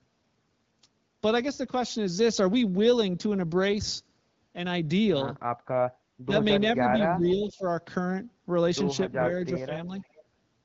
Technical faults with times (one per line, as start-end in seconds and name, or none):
6.24-6.33 speech suppressed in double talk
7.18-7.63 speech suppressed in double talk
7.27-7.32 echo leak
9.66-9.71 speech suppressed in double talk
9.95-10.23 echo leak